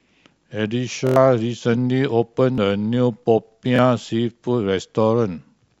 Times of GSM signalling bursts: none

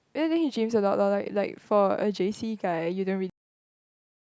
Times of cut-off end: 3.30-4.37

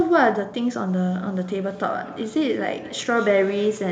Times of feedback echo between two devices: 1.22-3.92

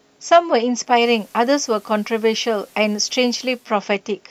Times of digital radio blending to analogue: 0.83-3.75

